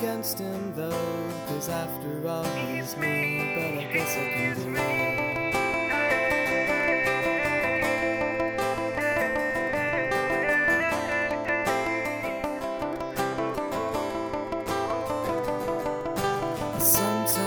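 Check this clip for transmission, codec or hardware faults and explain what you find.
No transmission, codec or hardware faults.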